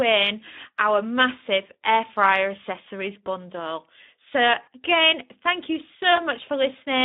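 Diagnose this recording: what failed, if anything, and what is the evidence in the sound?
The failure is at the codec stage: Speex speech coding throughout. The audio is confined to a narrow band, from about 200 Hz to 3.7 kHz, with nothing above. The damage is plainly audible across the whole clip. The speech sounds noisy and hoarse. That points to a low Speex bitrate, around 11 kbps. At that rate the CELP coder has too few bits for the excitation, so the fine texture of the voice is rebuilt roughly.

The network stage also failed: VoIP packet loss concealed by the speech codec. The first gap runs from 4.63 to 4.68 s, just before "again thank you". The second runs from 6.15 to 6.21 s, just after "again thank you". The first sounds like about 40 ms of lost audio, and the second like one lost frame. At each gap the decoder stretches its last pitch and filter, lowering the gain so the sound fades. 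The voice stays weak briefly after packets return.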